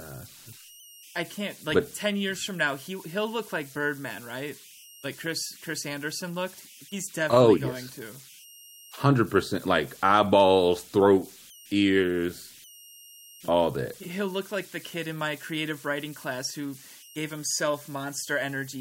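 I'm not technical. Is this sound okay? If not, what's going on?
No. Throughout this speech clip there's a thin whistle around 3 kHz, clearest in the pauses, with a grainy hiss under quiet speech. These are converter idle tones: the recording's digital converter slips into repeating patterns when the sound is very quiet.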